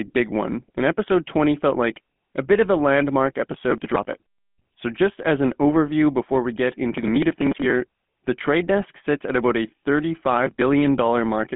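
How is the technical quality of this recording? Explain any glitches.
Technical quality is poor: the whole clip has passed through a GSM full-rate codec. Throughout, regular-pulse excitation over a modelled vocal tract gives a buzzy, gravelly roughness; band runs about 150 Hz to 3.5 kHz, nothing above 3.8 kHz, consistent with 13 kbps.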